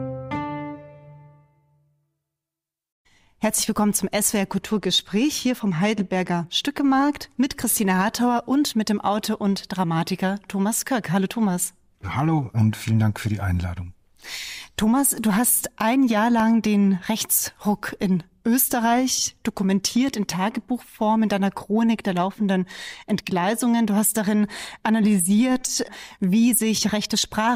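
From 16.13 to 17.21 s come CD scratch ticks: five brief dropouts, the longest about a millisecond, where a disc blemish beat error correction, seen as thin vertical spectrogram lines.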